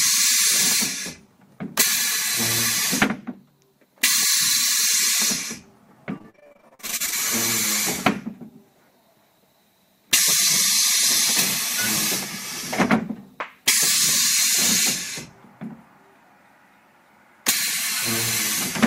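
From 6.18 to 7.14 s, repeated packet loss gives a choppy, robotic sound. Packets keep going missing in quick succession. Each hole is filled by stretching the previous sound, up to about 43 ms at a time. Nearly half this stretch is patched rather than real audio.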